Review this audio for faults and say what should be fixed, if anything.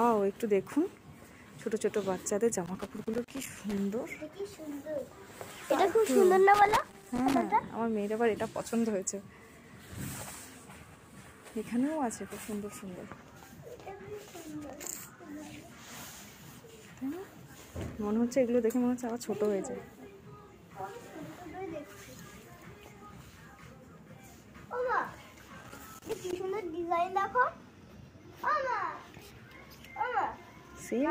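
Loose connector crackle shows up at 2.66–3.78 s, 6.54–7.42 s and 25.63–26.36 s: a contact intermittently breaking, chopping the signal into scratchy bursts. Reseat or replace that cable and clean the jacks before recording.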